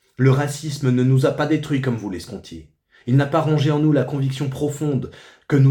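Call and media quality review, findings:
No faults found in the audio. Nothing heard here calls for a component-level follow-up.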